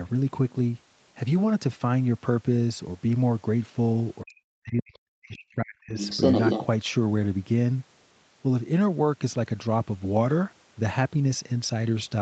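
From 4.22 to 5.96 s the talker's speech is suppressed in double talk, most likely because both sides spoke at once and the echo canceller could not separate the talker from the loudspeaker echo. It pulled the whole microphone signal down in pieces, about 40 dB at its deepest, over roughly one and a half seconds in total. What sets this apart from a dropout or packet loss is the pattern: the dips follow the other side's activity rather than falling at random, and the sound dips and cuts out in pieces instead of breaking off abruptly with codec glitches.

From 5.98 to 6.65 s the other side's voice leaks through. A second talker is heard at about the same level as the main speech, likely because the talker's loudspeaker output was not fully removed from the microphone. Unlike crosstalk from someone else in the room, this voice comes through the loudspeaker and then the echo canceller. It is band-limited, with the same upper limit near 8 kHz as the rest of the call path, which points to Opus at a low bitrate.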